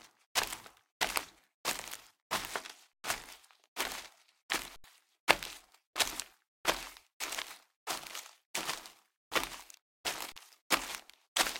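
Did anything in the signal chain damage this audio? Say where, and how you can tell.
Yes, at the output buffer. An underrun with held sample flattens the sound at 2.93–3.04, 4.76–4.84 and 10.32–10.36 s. Audio is skipped at each.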